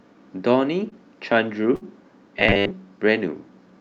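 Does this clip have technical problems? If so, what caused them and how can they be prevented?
Yes, there are three faults.

Short concealed packet loss at 0.89 to 0.93 s: about 20 ms of audio never arrived in time, and the decoder filled the gap by extending the preceding sound, leaving a brief smear. A larger jitter buffer or forward error correction would prevent it.

Burst of packet loss at 1.75 to 1.83 s: roughly 60 ms went missing, so the receiver continued the last sound while fading it, then resumed further on with that stretch lost. Redundant encoding and a steadier network route would prevent this.

Robotic sound from repeated short buffers at 2.40 to 2.72 s: a rigid, metallic buzz at 100 Hz lies over the sound. The likely cause is the playback side repeating a 10 ms block across most of this span because fresh audio arrived too seldom. Steadier audio thread scheduling and larger buffers would prevent it.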